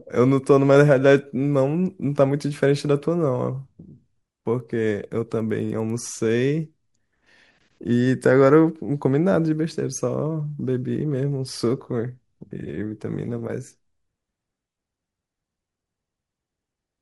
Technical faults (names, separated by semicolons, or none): resampler restarted on every block